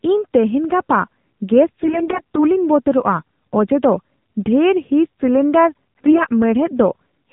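From start to finish the speech sounds muffled, buzzy and somewhat synthetic, with nothing audible above 4 kHz. That is the AMR narrowband mobile codec. The audio is reduced to 8 kHz sampling and rebuilt from a vocal-tract model driven by sparse pulses in 5 ms steps. The plainly audible roughness fits one of the lower AMR-NB modes, around 7.4 kbps, where too few bits remain to keep the voice natural.

From 1.83 to 2.41 s, and again from 6.06 to 6.26 s, the voice turns hoarse, scratchy and gargly while keeping roughly its pitch and loudness. These are AMR bit errors. On a weak link the less protected bits of each frame arrived corrupted, at a rate of roughly 7 percent, yet the check on the vital bits still passed. The decoder therefore placed its excitation pulses wrongly and used slightly wrong gain and spectral values.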